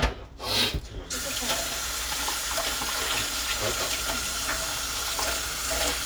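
A short recording of sounds, with no technical faults to be heard. Nothing in it points to a problem anywhere in how it was captured or reproduced.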